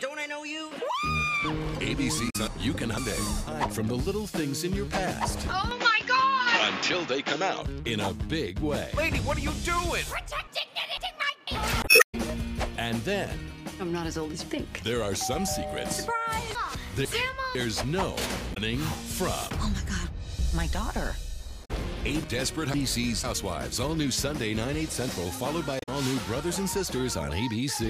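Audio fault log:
2.26 to 25.89 s, damaged data in a compressed stream: five bursts, at 2.26–2.36, 11.80–12.15, 18.50–18.57, 21.61–21.71 and 25.77–25.89 s. Corrupted bytes make the decoder misread frames and lose sync, then hunt for the next valid header, producing short chirps or squawks.
2.47 to 23.24 s, chunks out of order: four one-second spans, at 2.47–3.47, 10.47–11.47, 16.55–17.55 and 22.24–23.24 s. In each, a 500 ms chunk plays one chunk late, swapped with its successor. Nothing is missing, but the reordering creates hard joins that jumble the flow briefly.
5.71 to 7.62 s, input switched to a poorer device: the sound turns duller and narrower, with nothing above about 7.2 kHz and a new noise floor roughly 50 dB below the signal, at unchanged level and with no gap at the switch. A change to a lower-bandwidth microphone or headset profile is the likely cause.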